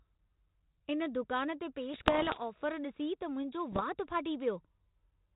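After "इन दुकान ते", from 1.94 to 2.42 s and again at 3.72 to 3.83 s, bit errors on the ADPCM link cause pops and rough bursts. Each error throws off the decoder's step size, which rings on briefly. This shows as broadband vertical streaks and jagged level jumps.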